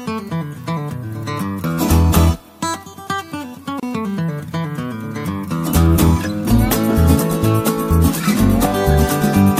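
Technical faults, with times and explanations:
3.80 to 3.83 s, gap at a join of encoded pieces: separately encoded segments were butted together untrimmed, leaving a 30 ms gap with smeared edges before the sound resumes.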